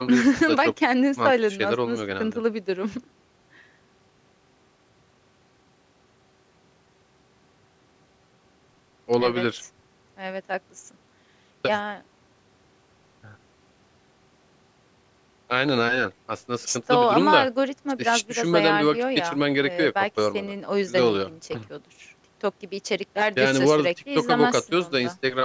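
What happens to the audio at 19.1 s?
Nothing goes wrong at 19.1 s: the speech continues intact through that moment, carrying only the ordinary sound of call microphone processing, with the lowest bass trimmed and nothing above 8 kHz.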